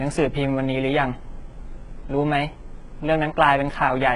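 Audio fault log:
Throughout: HE-AAC compression. The treble has a synthetic, metallic sheen: s sounds come out gritty and lispy, and nothing reaches above 11 kHz. The damage is heavy and likely comes from this codec at a very low bitrate, consistent with about 12 kbps. Only the lower spectrum is truly coded. The upper band is rebuilt by copying lower bands upward under a coarse envelope, so its harmonics fail to align with the real ones below.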